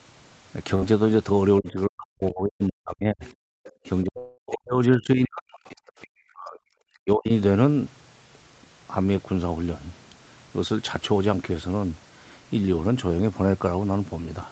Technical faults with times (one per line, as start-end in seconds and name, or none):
0.75-0.84 burst of packet loss
1.60-3.23 speech suppressed in double talk
3.24-3.70 other side's voice leaking through
3.51-3.57 background gated by the echo canceller
3.85-5.62 speech suppressed in double talk
4.18-4.40 long network dropout
5.55-6.07 other side's voice leaking through
5.90-5.99 background gated by the echo canceller
6.28-7.31 speech suppressed in double talk